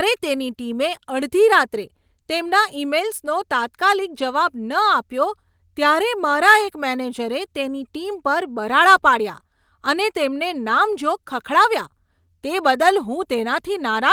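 No technical faults are audible.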